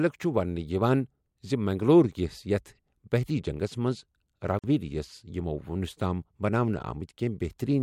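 At 4.59 s, right after "یتھ بحری جنگس منز", the speech drops out for about 48 ms and resumes at 4.64 s: a gap at a join of encoded pieces. Two separately encoded segments were butted together with the encoder's start-up delay and end padding left in, so silence sits in the middle of continuous speech. On a waveform it shows as a flat stretch with slightly blurred edges; a spectrogram shows a vertical empty band.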